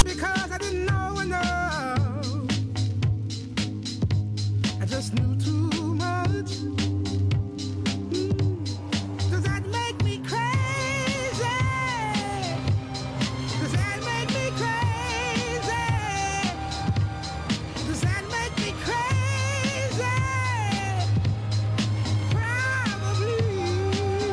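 File tags played as audio at 0.0 s: a block of text tags is read as samples, giving a brief, hard-edged, loud rasp pushed off to one side.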